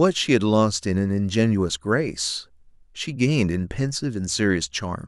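Speech recording with no audible technical faults.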